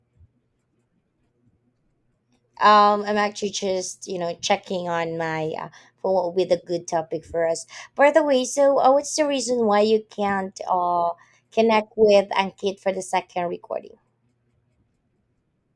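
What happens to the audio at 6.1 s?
Nothing goes wrong at 6.1 s; the speech carries on intact through that moment.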